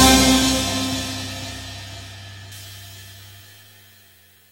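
A short run of sound that turns thin, bright and hissy from 2.52 s to the end: pre-emphasis left on, an FM 75 µs treble boost never undone, leaving 10 kHz about 14 dB hot.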